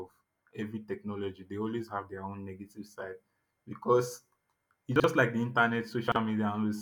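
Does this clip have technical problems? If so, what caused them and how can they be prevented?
Yes. Chunks out of order at 4.96–5.04 s, just before "like the", and again at 6.08–6.16 s: a 40 ms chunk plays one chunk late, briefly jumbling the speech. Unlike a dropout, nothing is missing. Reordering chunks by sequence number in a jitter buffer before playback prevents it.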